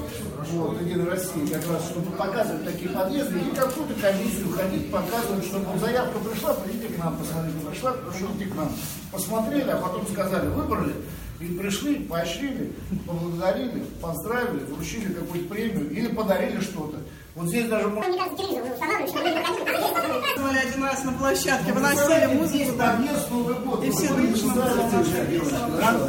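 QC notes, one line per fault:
2.04–3.40 s, 18.31–18.91 s and 21.95–22.71 s: drift correction step. Playback jumps 6.43% fast in the first and last spans, raising pitch 108 cents, and 6.43% slow in the middle span, lowering it 115 cents, each then snapping back. This is likely a clock-matching resampler changing its rate in one step to rebalance its buffer.
18.02–20.37 s: section at the wrong speed. This stretch plays at 1.85 times its original speed, so it sounds hurried and sits around ten semitones high, with the slow drift step inside it briefly pulling pitch down a further semitone. The likely cause is the section being played or edited against the wrong clock.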